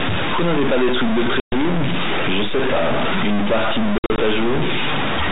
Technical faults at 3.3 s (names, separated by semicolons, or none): stuck bit